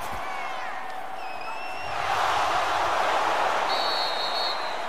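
DC offset runs from start to end: the whole waveform sits displaced from zero by a constant amount, at about -35 dBFS. Some stage in the chain, typically a converter or preamp with a small bias, added a fixed voltage. It isn't audible as a tone; the audio sounds unchanged, but a steady component appears at 0 Hz in the spectrum, and the shifted baseline eats a little headroom on one side of the waveform.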